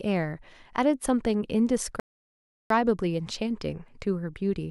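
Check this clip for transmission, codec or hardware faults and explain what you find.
One fault appears: a rebuffering stall from 2.00 to 2.70 s. The player's buffer ran dry, so the speech halts into about 0.7 s of silence, then resumes exactly where it stopped, leaving a flat waveform gap and a blank spectrogram column.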